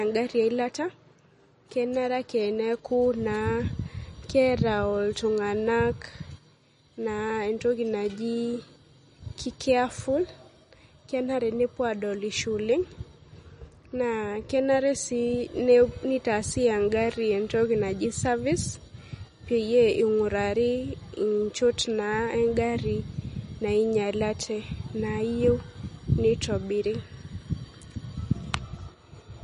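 Throughout the speech, MP3 compression damage is plainly audible: nothing survives above 10.6 kHz, and the thinned detail warbles with a watery swirl as weak components flicker between frames. That flicker, absent from a plain low-pass, marks likely MP3 starved of bits, fitting roughly 40 kbps.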